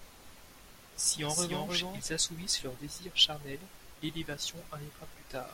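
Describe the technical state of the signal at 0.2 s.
At 0.2 s you're inside a doubled audio track, which is already running when the clip opens and carries on until 2.0 s, where the second copy cuts out abruptly just before "assouvissent leur désir charnel". A full-band duplicate of the speech trails the original by roughly a third of a second, about 5 dB quieter, with no reverb tail or room colour. The likely cause is the same signal being captured again through a slower path.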